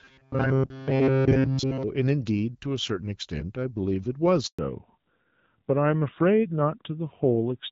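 A handover gap opens at 4.47 s and lasts 120 ms, until 4.59 s. The call was passed from one network to another, and during the switch no speech frames reached the receiver. The speech fades out within a few tens of milliseconds, leaving a short stretch of silence before the new link picks up. Whatever was said during that break is gone and never returns.

From 4.59 s to the end of the clip there is a fallback to narrowband. Before the handover the speech has the fuller HD Voice quality of the AMR-WB wideband codec, with only light coding damage that fits a rate around 12.65 kbit/s. Afterwards the call is running on the older narrowband AMR codec, and nothing above 4 kHz survives. The speech turns muffled and duller, and its coarser texture fits a low rate of about 7.4 kbit/s.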